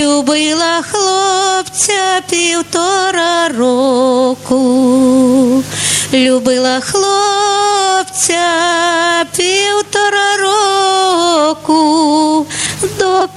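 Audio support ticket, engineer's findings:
Gain pumping throughout. Loud and soft parts squashed closer in level, swing around 15 dB. Likely input gain too high, fast limiter clamping down.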